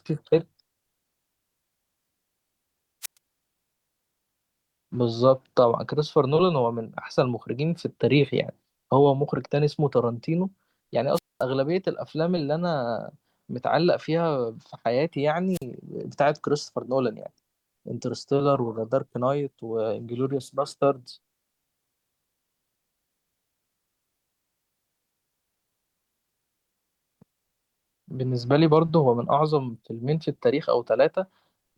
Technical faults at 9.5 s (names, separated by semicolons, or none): none